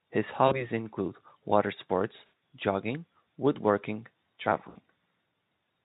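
A speech recording over a Speex link with VoIP packet loss concealed by the speech codec at 0.48–0.67, 2.17–2.28 and 4.69–4.77 s. Instead of silent gaps, each loss is a buzzy or noisy, fading smear that lingers after packets return, longest around 2.2 s, where roughly 160 ms went missing.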